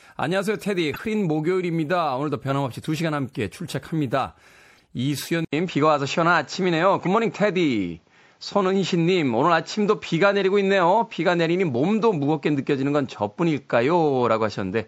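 Throughout, the speech sounds watery and swirly, with smeared s sounds. That is likely MP3 compression, plainly audible and consistent with about 64 kbps.

At 0.94 to 1.00 s, a corrupt frame decoded gives an error near -20 dBFS. Damaged data spread energy to wrong frequencies for about two frames. A fainter error near -45 dBFS follows at 4.75 to 4.80 s.

From 5.45 s to the end, the input switched to a poorer device, likely a different microphone or a headset's call profile. An 80 ms silence marks the change. The sound then turns dull, with nothing above 7.6 kHz. The level shifts by about 5 dB, and new background noise sits about 45 dB below the speech.

At 7.05 to 7.07 s, another corrupt frame decoded produces a short error near -20 dBFS.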